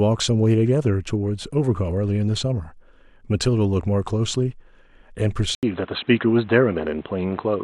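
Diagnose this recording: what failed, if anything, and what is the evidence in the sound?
Input switched to a poorer device at 5.55 s, likely at the driver stage: an 80 ms gap, then the speech stops above 4.1 kHz and gains faint new noise.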